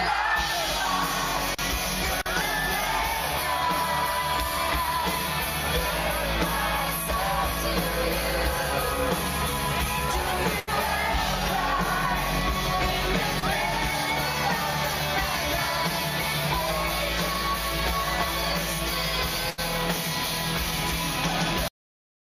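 At 10.59 s there is a burst of packet loss lasting to 10.74 s. A run of packets arrived too late or not at all. The receiver filled about 78 ms by stretching the last sound and lowering it as the gap went on. That gives either a held buzz or a fading hiss. About 80 ms of real audio is gone. When playback resumes, it has jumped ahead.

At 13.39 s comes a short concealed packet loss, ending at 13.44 s. Only about 20 ms of audio failed to reach the decoder in time. The receiver covered it with about 25 ms of continued sound, then blended back into the real signal. What you hear is a brief smear or wobble rather than a clear gap.

A second burst of packet loss runs from 19.50 to 19.60 s. It behaves like the first. About 77 ms is filled with the previous sound, extended and fading. About 80 ms of the original is skipped, so the audio picks up further along.

At 21.68 s the clip has a cut-off end. 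The final buffers were never written or played. The sound stops mid-sound and drops straight to silence with no natural decay. It stays silent to the end.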